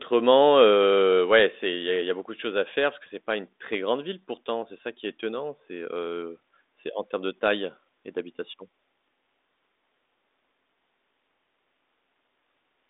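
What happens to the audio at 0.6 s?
Nothing goes wrong at 0.6 s: the speech passes intact through the G.726 ADPCM path at 40 kbit/s, limited to the telephone band with nothing above 3.8 kHz.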